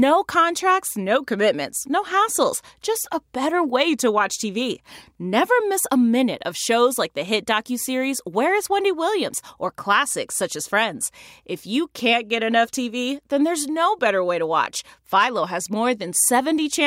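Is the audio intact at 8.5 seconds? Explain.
Yes, the audio at 8.5 seconds is intact, with no dropout, click, distortion or other fault heard at that moment.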